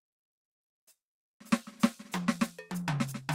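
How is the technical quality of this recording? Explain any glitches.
The music is disturbed by one glitch near the end. From 2.18 to 3.22 s there is a jitter buffer speed-up. The playback buffer had built up more audio than it targets. To shrink that delay, the receiver cut out many short slices, each a pitch period or a few long. About a tenth of a second disappears in total. The music runs at roughly 109% speed with its pitch unchanged. The tempo visibly rushes, and the steady pulse breaks.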